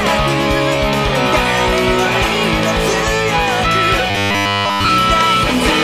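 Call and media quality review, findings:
Robotic sound from repeated short buffers, 4.10–4.89 s. Rigid metallic buzz at 100 Hz replacing the sound throughout. Likely jitter-buffer underrun: playout repeating the last 10 ms block for the whole stretch while incoming audio is skipped, the fixed repeat rate imposing the 100 Hz buzz.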